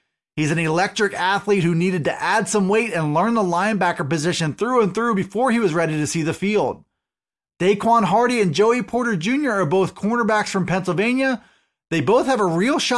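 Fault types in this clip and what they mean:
No fault types can be heard in this clip.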